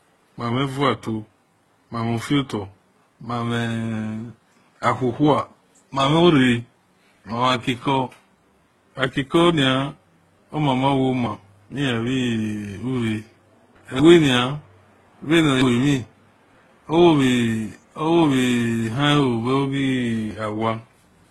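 Across the whole speech clip, the audio likely passed through a chain of lossy codecs, consistent with HE-AAC at a low bitrate followed by Opus and then HE-AAC again. Each stage re-encodes the previous one's smearing and swirling artefacts, so they pile up, and nothing remains above 13.2 kHz.

At 11.26, 14.0, 15.62 and 20.31 s, a dropped buffer from overrun likely occurs: the program failed to read its samples before the hardware overwrote them. Each time the sound jumps ahead, losing about a tenth of a second, or roughly a third of a second at 15.62 s.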